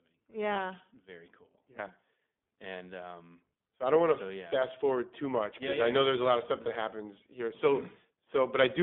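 Throughout, the speech passes through the iLBC codec. Everything outside roughly 200 Hz to 3.5 kHz is gone, and the voice has a plainly rough, synthetic edge rather than the clean dullness of simple band-limiting. This fits 20 ms iLBC frames at about 15 kbps.

From 0.54 to 0.56 s, and again from 6.62 to 6.69 s between "a lot of stuff" and "happens here", lost iLBC frames leave 20 ms and 40 ms gaps. The decoder fills each gap with a repeated pitch cycle plus noise, so it sounds like a brief buzzy held vowel rather than silence. The voice is right again almost immediately afterwards.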